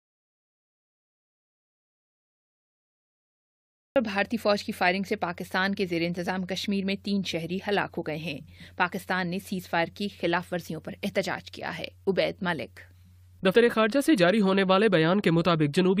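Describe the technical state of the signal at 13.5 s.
At 13.50 to 13.54 s the audio suffers compressed frames skipped: whole coded frames never reach the output, so playback leaps forward by roughly 50 ms of material. The seam is heard as a brief jump where the audio skips ahead. On a waveform the envelope shows an abrupt discontinuity in shape; a spectrogram shows a vertical seam where the texture jumps.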